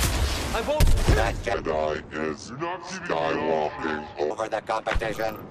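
From the start and all the way through there's a dull, gurgly, grainy quality, likely MP2 compression at a low rate, which fits something around 80 kbps. Then from 1.54 to 4.31 s there's a section at the wrong speed, playing at about 0.71 times normal, so everything drops roughly seven semitones and drags, likely from the wrong playback clock.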